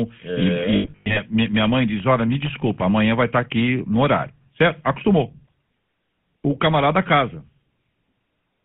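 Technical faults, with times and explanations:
Throughout, GSM full-rate codec: The audio sits in a narrow 150 Hz to 3.5 kHz line band with plainly audible buzzy, gravelly roughness, which fits 13 kbps full-rate GSM. Here the vocal tract is modelled and driven by coarsely spaced excitation pulses.
0.76 to 1.20 s, lost GSM frames: Just before "minha mãe diz", the sound repeatedly freezes into a rough, metallic ring. Missing frames, about 280 ms scattered over 400 ms with the longest gap near a tenth of a second, were replaced by repeating the last good frame.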